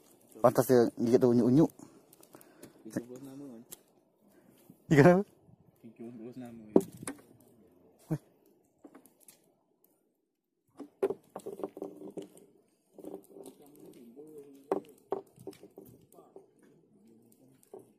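Nothing stood out as a technical fault anywhere in the recording on listening.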